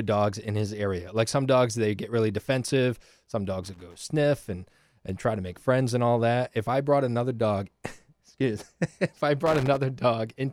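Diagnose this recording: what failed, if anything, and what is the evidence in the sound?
The analogue wiring failed: a worn or dirty contact intermittently broke the signal path. That gives loose connector crackle, irregular scratchy bursts in the speech from 3.64 to 4.00 s, just before "and and try to", and from 9.46 to 9.77 s, after "if I". The chopping comes from the contact making and breaking.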